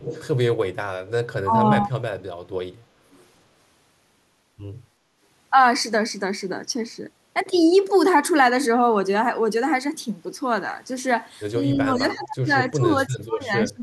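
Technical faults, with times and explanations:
0.0–0.25 s, 1.07–1.11 s, 2.15–2.23 s, 3.11–3.24 s, echo leak: a delayed copy of the speech trails the original by 316 ms, as brief scraps rather than a sustained repeat. The first is the strongest, roughly 10 dB below the speech. The middle two sit around 25 dB down, and the last is at about 35 dB down. This is likely a far-end loudspeaker whose echo canceller let part of the returned signal through.
1.44–1.63 s, speech suppressed in double talk: the speech briefly dips by up to about 15 dB for roughly 150 ms. This likely happened because both ends were talking at once and the echo canceller attenuated the near talker along with the echo.
11.76–12.52 s and 12.7–13.82 s, speech suppressed in double talk: longer, deeper dips follow. The speech falls by about 25 dB and then about 30 dB, affected for most of those stretches. The same overlap-triggered attenuation is likely responsible.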